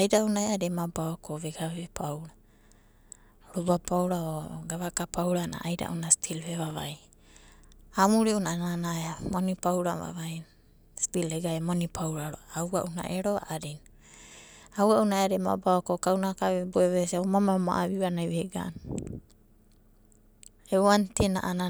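A speech recording with a brief irregular burst of scratchy crackle from 6.67 to 6.76 s: loose connector crackle, where a worn or dirty contact intermittently breaks, chopping the signal.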